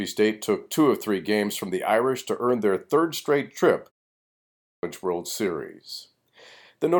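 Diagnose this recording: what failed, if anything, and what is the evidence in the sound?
Playback fault: a clipped start after a pause. After 0.52 s of silence, the output device was still waking, so 0.48 s of speech from 4.35 to 4.83 s is swallowed. The waveform jumps from flat straight into speech, and spectrogram energy begins abruptly, with no onset.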